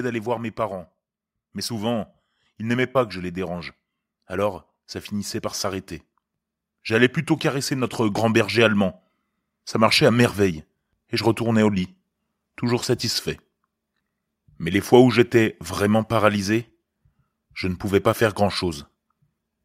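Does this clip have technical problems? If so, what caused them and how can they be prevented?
Yes. Automatic gain rising runs from 0.55 s to 12.91 s: the gain control, judging the input quiet, lifted it about 11 dB, swelling voice and background together. The waveform envelope widens steadily, and the spectrogram brightens throughout, noise floor included. Use a fixed input gain instead of AGC.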